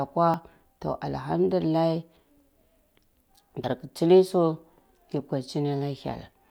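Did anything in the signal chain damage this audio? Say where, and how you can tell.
Yes. At the driver or buffer stage, the capture software likely failed to collect its samples before the hardware overwrote them: a dropped buffer (overrun). At 0.34 s and 3.64 s the speech skips ahead with no gap, losing roughly 20 ms and 70 ms.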